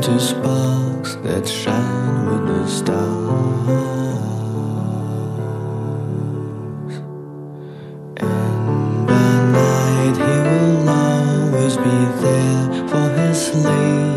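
Twice the audio came out as zeros, a block of digital silence. At 0.65 s the gap lasts about 0.5 ms, and at 6.50 s it lasts 2.9 ms, a length that fits a 128-sample buffer. Because the audio drops straight to zero and returns with no fade, each edge is a hard step. Both gaps are too brief to hear as holes, so each comes across as a tick or dip.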